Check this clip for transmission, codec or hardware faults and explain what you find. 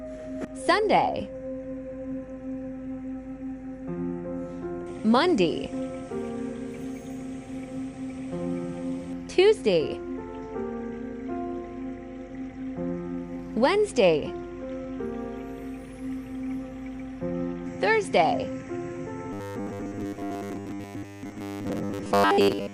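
One fault shows up, at the end. From 19.33 to 22.73 s, robotic sound from repeated short buffers imposes a fixed 100 Hz metallic buzz, likely from 10 ms buffers replayed while most real audio is skipped. Unlike a dropout, it never goes silent.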